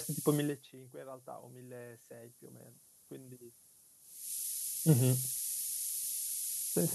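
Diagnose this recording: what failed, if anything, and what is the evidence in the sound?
Sample-format conversion failed: the speech has been reduced to 5-bit samples with noise shaping. A steady, thin hiss runs the whole clip, nearly as loud as the speech, climbing sharply toward the top of the band. The rounding error is pushed upward, so a spectrogram shows a dense noise floor brightening toward the highest frequencies.

Call processing shows automatic gain rising from 0.91 to 3.41 s. After the input fell by about 24 dB, the gain control slowly added about 4 dB, lifting voice and room noise together. The waveform envelope swells gradually across those 2.5 seconds rather than jumping.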